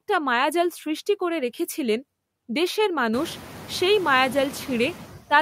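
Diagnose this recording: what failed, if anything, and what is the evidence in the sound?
Noise dips about 10 dB between words and rises under them throughout, including after room noise climbs around 3 s: noise suppressor artifacts from call processing.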